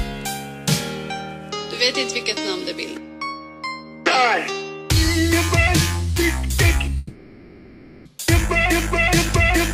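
At 6.97 s the sound turns into a smeared, buzzy continuation of itself that carries on until 8.07 s, about 1.1 s, and then the audio resumes with that stretch simply gone. This is likely a long network dropout, with the receiver filling the entire gap by extending the last sound it had.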